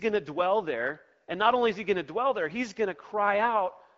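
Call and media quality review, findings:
No faults found.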